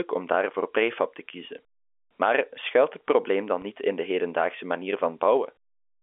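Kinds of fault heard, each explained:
Packet loss with pitch repetition: from 3.62 to 3.64 s the speech briefly sticks on a slightly held, buzzy tone. About 20 ms of audio went missing, which fits two 10 ms packets, and the receiver bridged the gap by repeating the last pitch period.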